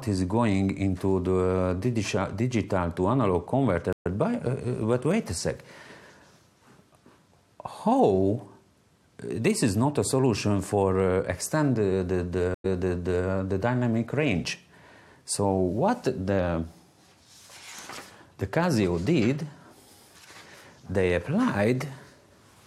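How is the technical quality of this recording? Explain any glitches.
Two stream reconnects interrupt the recording. At 3.93 s the audio drops out for 120 ms, then resumes roughly a tenth of a second further on. At 12.54 s a 98 ms gap is followed by a jump back 627 ms, repeating material until 13.27 s. Each time the connection broke, the player restarted its decoder mid-stream, and the server re-sent a burst on the second reconnect.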